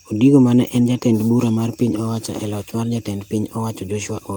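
No technical faults can be heard anywhere here.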